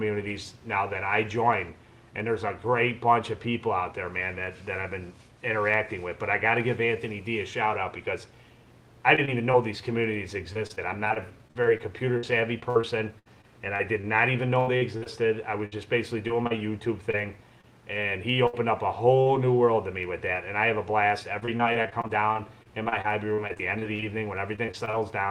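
Around 9.15, 9.25 and 9.51 s there's short concealed packet loss: roughly 20 ms holes patched by extending the last sound, heard as quick smears or wobbles. From 10.53 to 17.65 s, repeated packet loss makes it choppy and robotic, with about thirty patched gaps up to 78 ms each. At 18.47 s and again at 19.21 s come bursts of packet loss, about 60 ms and 40 ms, where the sound hangs as a fading buzz or hiss and then jumps ahead. From 21.39 to 25.02 s the repeated loss returns, with dense short gaps of up to 38 ms giving that same choppy, broken texture.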